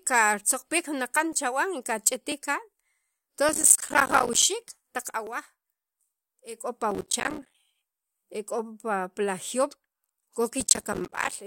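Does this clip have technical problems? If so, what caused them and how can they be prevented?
Yes. There are small skips from overlap between stream segments at 1.33, 2.32, 5.27 and 7.28 s. Where two segments' time stamps overlap, the player trims audio that wasn't actually duplicated, so the waveform jumps. The timing fits segments about 1 second long. To prevent it, fix the segmenter's timestamps so consecutive segments butt up exactly.

There's also processor overload crackle from 3.49 to 4.43 s, 6.91 to 7.55 s and 10.60 to 11.35 s. The CPU kept missing deadlines on what sound like buffers of around 5 ms, dozens of them in each stretch, and each miss dropped a sliver of silence into the speech, giving that gritty tearing. To prevent it, free up CPU headroom or use a larger audio buffer.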